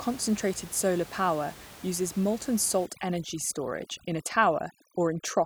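A speech clip. From 2.86 s to the end, after "solar power uses molten", overdone noise removal switches off bands near the noise estimate, leaving a lowered background that breaks up into twinkling specks.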